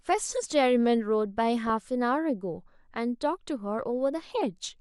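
Throughout the speech, the encoder has likely run short of bits for MP2 compression at a low rate, in keeping with roughly 80 kbps. Starved of bits, MPEG Layer II switches off its upper sub-bands and quantises the remaining ones coarsely. Here the damage is plainly audible: the top end is dull and muffled, with a gurgling, granular grain riding on the voice as bands flicker in and out.

From 1.67 to 1.84 s, DAB burbling breaks in: bit errors slipped past the error correction into the MP2 data, at a small rate of around a tenth of a percent, enough to corrupt what sounds like about ten frames. The corrupted samples produce a brief burst of noise blips in single sub-bands over the speech before it clears.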